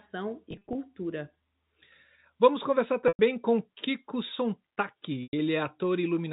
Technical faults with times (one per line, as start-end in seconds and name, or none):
0.51-0.75 packet loss with pitch repetition
3.08-3.19 packet loss with pitch repetition
5.23-5.33 packet loss with pitch repetition